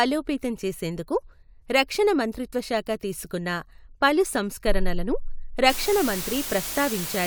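From 5.70 s to the end at 7.27 s, just after "తీసుకున్న పలు సంస్కరణలను", the speech shows low bit depth with dither. It is held to about 5 bits. Dither turns the rounding error into steady white noise. A constant, even hiss sits roughly 10 dB below the speech, without distortion.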